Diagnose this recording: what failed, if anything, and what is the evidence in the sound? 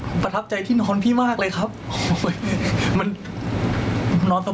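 Gain pumping runs through the whole speech clip. The level swings by roughly 20 dB, so loud and quiet passages sit unnaturally close and the delivery sounds squashed. The likely cause is input gain set far too high, with a fast limiter or compressor in the call processing clamping down on each peak. A noise gate, by contrast, would cut the background to silence in the gaps.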